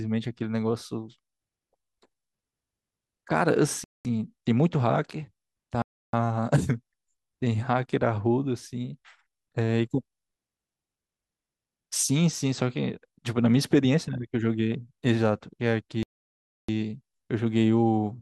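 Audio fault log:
3.84–4.05 s, 5.82–6.13 s and 16.03–16.69 s, Bluetooth stall: the wireless link was likely held up by interference, so packets arrived late, the headphones' buffer emptied and playback had to wait for resent data. Each time the speech drops abruptly to silence, for about 0.21 s, 0.31 s and then a longer 0.66 s, and resumes where it broke off. There is no fade at either edge, only a hard gap in the sound.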